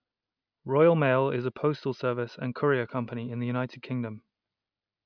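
Speech recording with no technical faults to report.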